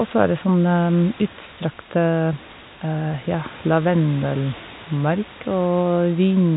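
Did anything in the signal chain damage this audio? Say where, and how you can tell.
No, the speech arrives intact through a telephone path whose band stops at about 3.8 kHz, consistent with G.711 A-law coding at 64 kbps, and the room noise beneath it sits about 18 dB below the voice as part of the original recording.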